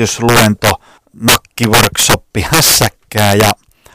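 Speech runs throughout with integer overflow: the gain pushes peaks about 10 dB past the integer limit, and a few percent of samples wrap to the opposite sign, giving violent cracks on loud syllables. The waveform shows peaks jumping to the opposite sign, and the spectrogram shows broadband vertical streaks.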